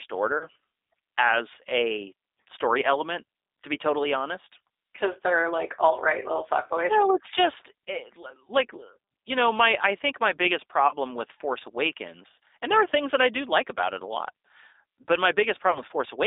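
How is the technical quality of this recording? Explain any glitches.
The quality is that of a narrowband phone call, with compression artefacts throughout and three short dropouts.

Across the whole clip the speech sounds thin, slightly rough and synthetic. Nothing below about 300 Hz or above about 3.7 kHz comes through, so there is no body and no sibilant air. This is the G.729 codec at work. It rebuilds speech from a vocal tract filter, a pitch predictor and a few coded pulses per frame, which fits an 8 kbit/s G.729 stream. The damage is plainly audible.

The three dropouts are VoIP packet loss concealed by the speech codec. They occur at 0.38 to 0.46 s, at 10.88 to 10.95 s just after "I think my biggest", and at 15.72 to 15.83 s. Each one briefly smears into a buzzy tone or a coloured noise that fades. About 30 ms of audio is missing each time, which fits a single lost packet. The decoder fills the gap by extending its last pitch and filter at falling gain, and the voice stays weak or distorted for a moment afterwards while the following frames recover.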